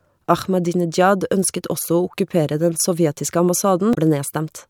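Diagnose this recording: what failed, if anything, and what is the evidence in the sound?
Damaged data in a compressed stream, 3.91 to 3.97 s, at the codec stage: corrupted frames make the decoder lose sync, producing a 66 ms blip in the speech.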